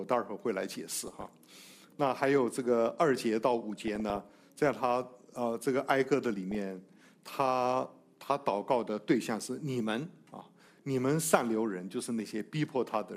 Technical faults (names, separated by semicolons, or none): DAB burbling